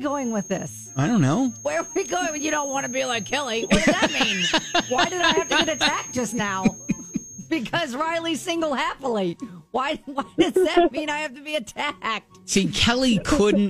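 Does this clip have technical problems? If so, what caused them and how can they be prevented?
Yes. A thin feedback whistle at 6.4 kHz runs from the start to 7.54 s, about 15 dB below the sound. It is likely a loudspeaker-to-microphone loop held just at the feedback point. Lowering monitor gain or notching that frequency prevents it.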